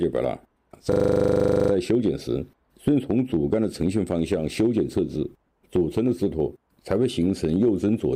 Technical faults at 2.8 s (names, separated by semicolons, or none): none